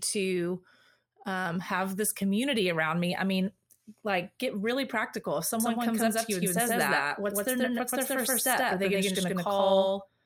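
Speech, with a doubled audio track from 5.6 s to the end: an equally loud full-band copy trails by around 150 ms, likely from a second, slower capture path. The waveform and spectrogram show every syllable repeated as a clean, undecayed offset twin, beginning abruptly.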